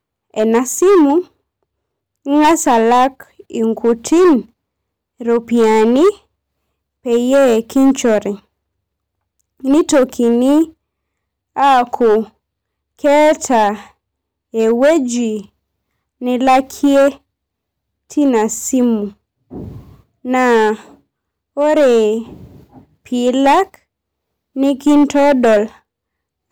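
Hard clipping runs through the whole speech clip: the signal is driven about 11 dB past what the chain can pass, so around one sample in twenty is cut flat. Louder syllables turn harshly fuzzy, the waveform shows squared-off peaks, and the spectrogram shows smeared high-frequency energy on each loud burst.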